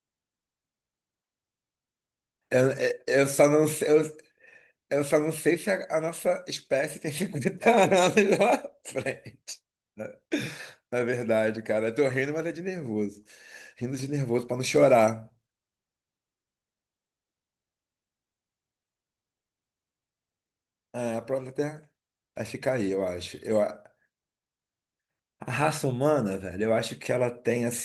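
No technical faults are present in this speech clip; it carries light coding damage consistent with Opus voice compression in hybrid mode at full bandwidth, which fits a bitrate of around 24 kbps.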